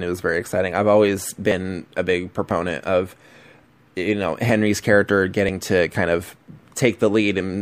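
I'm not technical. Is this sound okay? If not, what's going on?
No. There is audio missing between chunks, at 2.51 and 4.49 seconds. At each point a tiny sliver of the speech, just a few thousandths of a second, is gone, and the sound on either side is joined straight together, so you hear a very brief skip. The likely cause is that the recording was made in one-second pieces, and a little was lost each time one piece ended and the next began.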